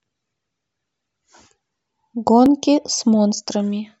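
From 0.46 s to 3.47 s the speech is broken by short clicks. They come at a steady 1.0-second interval, about four in all. Each is a brief tick in the signal. The pattern points to clock drift buffer slips. Two devices likely run on separate clocks that disagree by around a thousand parts per million. The buffer between them drifts until a few dozen samples are dropped or repeated. Each slip leaves one click.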